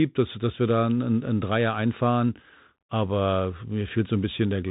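From start to finish the speech carries Bluetooth CVSD headset codec damage, plainly audible. Nothing passes above 3.8 kHz, so a spectrogram shows a hard ceiling there. The one-bit step tracking, which fits a 64 kbps link, turns s sounds scratchy and lays granular hiss under everything.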